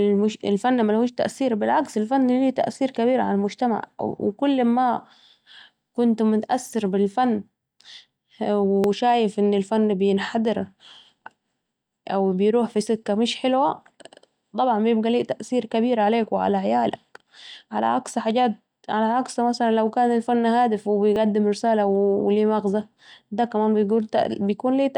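At 8.84 s, right before "شايف أن الفن بينحدر", the speech jumps ahead with no gap, and the same thing happens again at 21.16 s. Both sound like a dropped buffer (overrun): the capture side likely failed to collect its samples before the hardware wrote over them. Only a sliver of audio, a millisecond or two, goes missing each time, so you hear a jump rather than a lost syllable.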